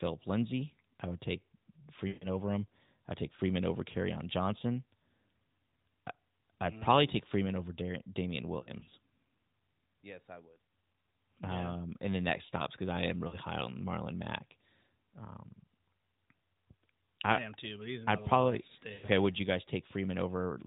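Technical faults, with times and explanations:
2.08–2.28 s, lost AMR speech frames: a run of about 140 ms, roughly seven 20 ms frames, where the decoder keeps repeating the last good pitch and vocal tract settings while turning the gain down, so the speech smears and fades before returning rough.
8.60–8.94 s, lost AMR speech frames: about 120 ms of gaps scattered over 320 ms, none longer than 40 ms, heard as a string of brief warbles rather than a fade.
13.28–13.37 s, lost AMR speech frames: a single 40 ms gap, a quick dip and warble in the narrowband sound.
18.94–19.07 s, lost AMR speech frames: about 100 ms concealed, drawn out and sagging toward silence, then a weak restart.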